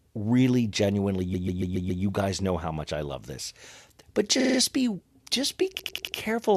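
Repeated frames cause three stutters. Chunks of compressed audio were decoded again. At 1.33 to 2.02 s, a 139 ms block plays five extra times. At 4.39 to 4.58 s, a 46 ms block plays four extra times. At 5.78 to 6.16 s, a 93 ms block does likewise.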